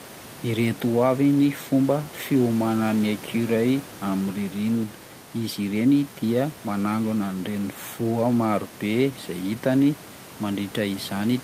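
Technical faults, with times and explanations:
No technical faults are present; the speech signal is intact, with only the ordinary background noise of the room audible at about 21 dB below the speech.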